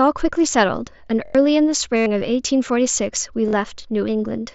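Repeated buffer at 1.25 to 1.35 s: a 23 ms slice, which fits a 1024-sample buffer, replays four extra times with hard joins, giving a stutter in place of roughly a tenth of a second of speech. Concealed Bluetooth headset packet loss follows at 1.96 to 2.06 s, where the receiver patches about 98 ms of missing audio with repeated recent waveform, heard as a held buzzy tone ending in a slight warble. A second repeated buffer at 3.48 to 3.53 s plays the same 23 ms slice twice more, a shorter stutter replacing roughly 50 ms.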